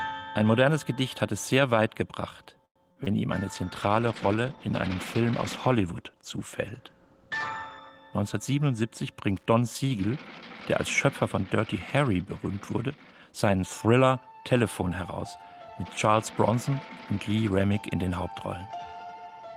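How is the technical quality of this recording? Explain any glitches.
The recording has several network-related glitches, most of them in the first half, and one hardware fault, so its technical quality is uneven.

From 2.65 to 2.79 s there is a call audio freeze, likely from packets being held up so that the jitter buffer ran dry. The receiver stretched the last sound into a fading buzz for about 100 ms, roughly 90 ms of which sits near silence. The stream then picks up where it stopped, about 100 ms later than before, with nothing lost. On a spectrogram this looks like a smeared, decaying band followed by a near-empty gap, and the waveform shows a tapering envelope.

Short concealed packet loss follows at 2.92–2.98 s (40 ms) and 3.04–3.08 s (20 ms). Those stretches never reached the decoder in time, so it extrapolated from the preceding sound and crossfaded back. Each is heard as a brief smear or wobble. 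A spectrogram shows short patches where the harmonics go blurry or flatten out, and the waveform has slightly repetitive cycles at those points.

A call bitrate drop runs from 3.50 to 8.89 s. The encoder's budget was halved from 32 to 16 kbps and stayed at the lower rate for about 4.3 s. Coarser coding makes the audio rougher and more watery, with a duller top end. On a spectrogram the upper frequencies thin out or cut off abruptly and the texture turns blotchy, then fills back in at recovery.

Loose connector crackle appears from 9.36 to 9.46 s. A worn or dirty contact made and broke repeatedly, chopping the signal. It sounds like a short, irregular scratchy burst. The waveform shows jagged spikes and dropouts, and the spectrogram shows thin vertical broadband streaks.

From 13.18 to 13.93 s a jitter buffer speed-up plays the audio at about 112% speed. The buffer had built up excess delay, so the receiver trimmed out pitch-period-sized slices totalling about a tenth of a second. 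The pitch stays the same but the pacing sounds hurried. On a spectrogram, events in this stretch sit slightly closer together, while the harmonic spacing is unchanged.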